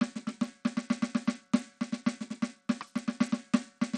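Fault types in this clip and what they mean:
Bluetooth SBC compression: the music has nothing above 11.7 kHz, and the remaining treble flickers with gritty noise, unlike a clean low-pass filter, likely an SBC link starved near 80 kbps.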